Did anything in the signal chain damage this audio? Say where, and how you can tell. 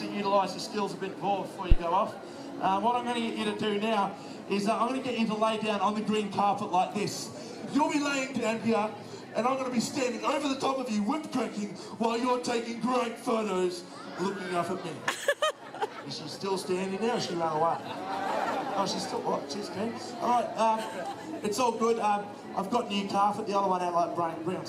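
Yes. A phantom power thump at the analogue input, 1.72 to 1.79 s, peaks about -6 dBFS and dies in 16 ms. A supply step through coupling capacitors gives one smooth low bump, not a connector's crackle.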